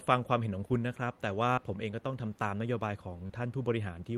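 A speech recording with two brief smears, at 1.53 to 1.59 s and 3.27 to 3.31 s: short concealed packet loss. About 40 ms and then 20 ms of audio arrived too late, and the decoder papered over each gap by extending the preceding sound before blending back in.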